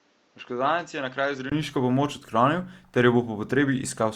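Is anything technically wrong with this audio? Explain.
Yes. From the start to 1.52 s the sound is dull and narrow, with nothing above 7.6 kHz, about 10 dB quieter, and carrying its own noise floor roughly 35 dB below the signal. A 20 ms silence follows, and then fuller sound takes over. This is likely an input switched to a poorer device, one that captures a narrower band. A simple filter or EQ change would alter the tone but not bring in a separate noise floor, a level drop and a silence at the switch.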